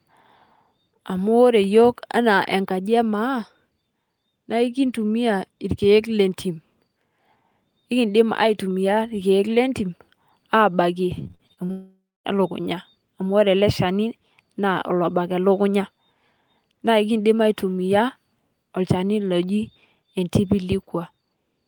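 From 11.23 to 11.71 s the speech breaks up with repeated packet loss, giving a robotic sound. Seven short holes appear, the longest 43 ms. Each is patched by stretching the previous sound, so about 41% of this span is filler. The result is choppy.

From 11.71 to 12.27 s the audio stops, a long network dropout being the likely cause. The last sound is drawn out as a fading buzz, then about 0.24 s of silence follows. Roughly 0.54 s is lost, and speech returns at "e luukunyaa amu ore".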